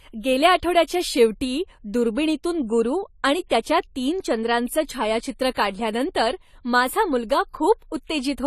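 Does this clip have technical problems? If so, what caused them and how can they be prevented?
Yes. Throughout the speech, everything above 13.9 kHz is missing and the sound is dull and smeared with a fizzy, warbling edge. This is likely AAC compression at a low rate, around 32 kbps. A spectrogram shows a flat ceiling at 13.9 kHz and patchy gaps below it. Encoding at a higher bitrate prevents it.

Pre-echo appears at 3.48 to 3.51 s and 5.54 to 5.56 s, where a hiss of about 23 to 24 ms comes just before sharp attacks. The codec spreads noise across the whole block, so the quiet moment before each onset fills with it. On a waveform, low-level fuzz sits ahead of the transient, and a spectrogram shows a broadband smear before it. Higher bitrates or encoders with short-block switching prevent it.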